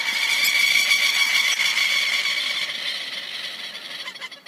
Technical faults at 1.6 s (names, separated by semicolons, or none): corrupt frame decoded